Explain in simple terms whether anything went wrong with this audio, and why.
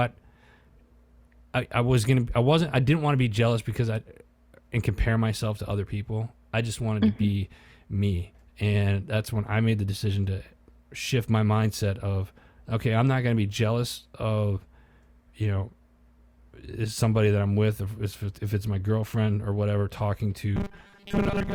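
Right at the tail, from 20.57 s to the end at 21.54 s, the speech turns into robotic sound from repeated short buffers. It becomes a stiff, metallic buzz pitched at 200 Hz. It still roughly tracks the talking, but most of it is repeated filler. The likely cause is that fresh audio stopped arriving on time, so the software kept looping the last tiny chunk, which fits a buffer about 5 ms long, and skipped the real sound.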